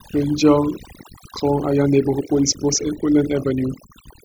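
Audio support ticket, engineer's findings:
Overdone noise removal, whole clip: background drops, breaking up into twinkling specks. Denoiser set too strong, cutting bands near its noise estimate, taking quiet speech detail too.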